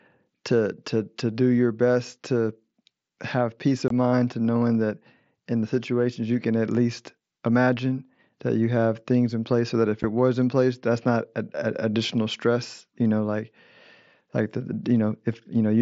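Unconcealed Bluetooth headset packet loss drops speech twice. From 3.88 to 3.91 s, 22.5 ms goes missing, which fits about three lost headset frames. At 10.03 s, a 7.5 ms gap fits one frame. Nothing fills either hole, so the speech cuts abruptly to silence or an idle pattern.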